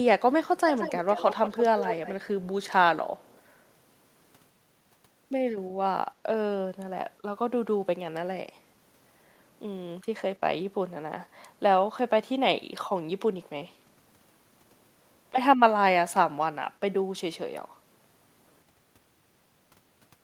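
From 0.71 to 1.64 s and 1.8 to 2.26 s, an echo leak trails the speech by 175 ms, likely from a loudspeaker echo canceller letting sound through. It is strong, around 10 and 5 dB down, showing as shifted ghost harmonics. At 3.18 to 3.41 s it is barely visible.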